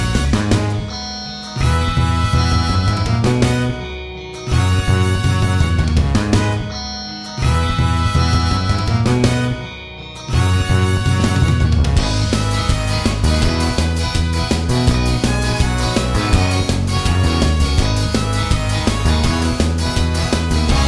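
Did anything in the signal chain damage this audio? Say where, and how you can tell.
No, nothing I can hear points to trouble anywhere along the chain, so there's no stage to single out here.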